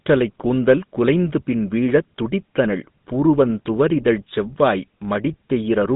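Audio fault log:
Throughout: GSM full-rate codec. The speech has the buzzy, gravelly roughness of the original GSM coder, and it's plainly audible. The coder rebuilds the voice from a vocal-tract filter driven by a regular pulse train that keeps only a thinned-out excitation, which gives the coarse grain. The band runs from about 150 Hz to 3.7 kHz, so the speech sounds thin and muffled. The roughness fits a 13 kbps full-rate stream.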